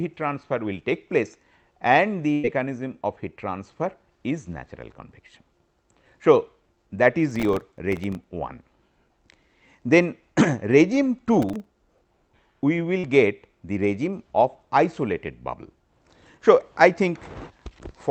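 A burst of packet loss hits the audio from 2.33 to 2.45 s. About 100 ms never arrived, and the receiver covers the whole hole by extending the last sound while fading it, so a held buzz or fading hiss replaces that stretch before playback resumes further on. Processor overload crackle appears twice, from 7.31 to 8.24 s and from 11.42 to 11.99 s. Each time the processor repeatedly misses its buffer deadlines, and every miss drops a tiny silent gap with hard edges into the sound. The rapid, gritty crackle this produces fits buffers of roughly 1.5 ms, a few dozen missed in the first burst and a couple of dozen in the second. A short concealed packet loss occurs from 12.99 to 13.05 s. About 40 ms was lost, and the decoder bridges it by continuing the preceding sound and blending back into the real signal, leaving a brief smear or wobble at that point.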